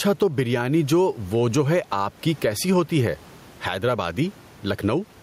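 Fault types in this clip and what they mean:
Gain pumping: throughout the speech the gain swings by around 10 dB, ducking under loud syllables, likely from gain set far too high with a fast limiter. The waveform shows flattened, evened peaks.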